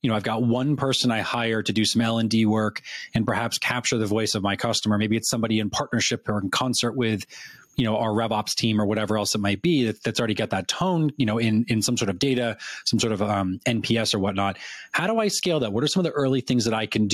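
Gain pumping runs through the whole speech clip: the gain is pulled down on each loud sound, a swing of roughly 15 dB. Likely cause is gain set far too high with a fast limiter clamping it. The waveform looks flattened, with loud and soft parts closer in level.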